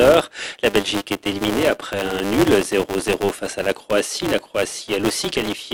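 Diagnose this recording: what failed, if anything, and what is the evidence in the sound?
Filter restarted on every block, throughout: a 200 Hz buzz tracking signal level. The processing stage resets filter state each 5 ms block, so every block starts with a transient.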